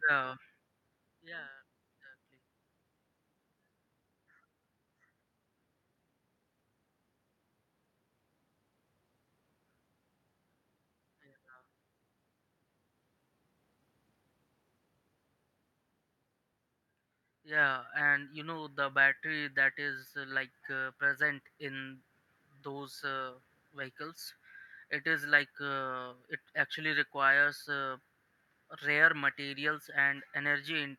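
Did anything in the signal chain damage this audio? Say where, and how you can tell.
No, nothing in the chain damaged this speech; the steady room background belongs to the acoustic space, and the level shifts near the start and around 17 s come from the talker moving relative to the microphone.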